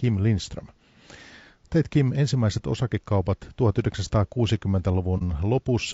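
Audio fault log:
throughout: low-delay AAC compression. The speech is plainly rough and grainy, with noise filling the gaps between harmonics and a thin, synthetic-sounding top band. This is likely short-frame AAC-ELD coding at around 32 kbps. Unlike narrowband or lowpass damage, the upper band is present but artificial.
5.18 to 5.22 s: AAC frame loss with muting. The sound fades out and back in around a brief dip of about 30 ms, consistent with one lost frame zeroed by the decoder. The overlapping windows soften both edges, unlike a hard sample dropout.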